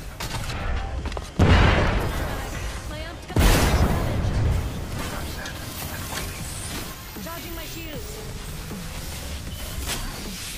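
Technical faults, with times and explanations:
1.87 s, 7.90 s, 9.90 s: overlapping chunks. Each 2-second block begins 7 ms early, so that sliver replays at the join, heard as a click.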